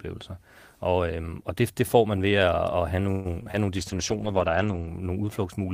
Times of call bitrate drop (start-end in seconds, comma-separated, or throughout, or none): 3.78-4.94